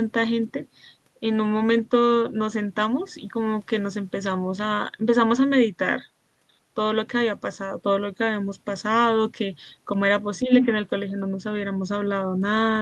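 From 10.43 to 10.51 s the talker dips by roughly 10 dB: speech suppressed in double talk. This is likely an echo canceller ducking both sides, a partial fade rather than a dropout's clean silence.

From 10.56 to 10.66 s, the other side's voice leaks through, a second voice about as loud as the talker. This is likely loudspeaker echo the canceller missed, distinct from the dip just before.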